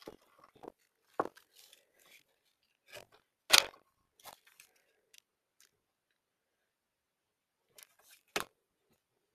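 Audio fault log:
Throughout: noise suppressor applied to music or sounds. A suppressor built for speech treats steady tones, ambience and tails as noise and pulls them down, while attacks pass. The level swings by about 15 dB, so the sound pumps and thins between onsets.
Throughout: buffer tearing. Writer and reader of the ring buffer have drifted, so each period splices in roughly 15 percent of audio from about 40 ms earlier, with hard joins. The result is a rattling buzz at 46.9 Hz, which fits a 1024-sample buffer, heard only while sound plays.
0.70–1.09 s, 2.20–2.87 s, 3.20–3.48 s, 3.87–4.19 s, 4.81–7.71 s, 8.54–9.34 s: sound cut by the noise suppressor. Here the suppressor misjudged sustained or decaying material as noise, dropping it by up to about 8 to 10 dB and clipping decays short, longest from 4.81 to 7.71 s.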